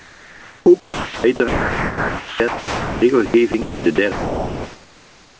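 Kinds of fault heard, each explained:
Sound chopped by the voice detector: choppy throughout, with about 4.2 s replaced by synthetic comfort noise, likely from the sender's voice detector repeatedly switching transmission off.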